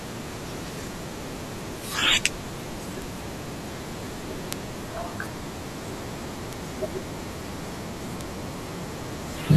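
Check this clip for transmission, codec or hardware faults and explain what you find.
The clip contains bit error spikes at 3.02, 4.53, 6.53 and 8.21 s. Each is a flipped bit that makes one or two samples jump by a power of two, peaking at about -14, -2, -8 and -14 dBFS, and each is heard as a broadband tick unrelated to the speech.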